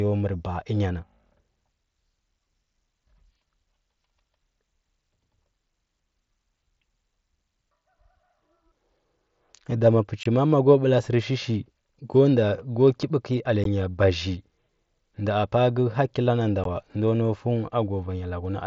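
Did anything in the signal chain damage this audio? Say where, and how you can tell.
Yes. Unconcealed Bluetooth headset packet loss hits the wireless headset link at 10.23–10.26 s, just before "ma a", and at 13.64 s and 16.64 s. Each is an abrupt hole of about 22 ms, then 15 ms. That fits lost 7.5 ms mSBC frames replaced by silence, not concealed.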